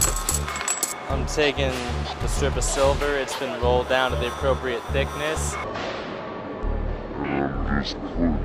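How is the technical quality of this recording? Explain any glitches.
A section at the wrong speed mars the ending. From 5.64 s to the end, the sound drops deep and sluggish, about ten semitones lower, likely from playback against the wrong clock at 0.518 times normal speed.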